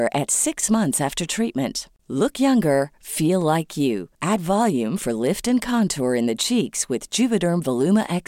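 No technical faults can be heard anywhere in the speech; the signal holds steady throughout, with no disruption to its level, timing or continuity.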